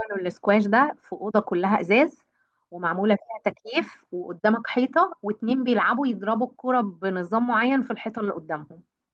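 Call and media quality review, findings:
Slight recurring hiccups, sound running hurried and uneven throughout. Clock drift between sender and receiver: sender clock about 5 percent fast, jitter buffer steadily overfilling, receiver forced to discard audio to keep latency bounded.

Repeated timing corrections, 0.11 to 9.11 s: small cuts at uneven spacing, all shortening, net pace about 105 percent. Jitter buffer trimming short segments to track the faster sender. Band-limited to about 12 kHz, consistent with Opus near 32 kbps.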